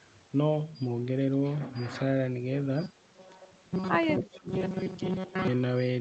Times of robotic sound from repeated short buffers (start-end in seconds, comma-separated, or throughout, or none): 2.82-5.47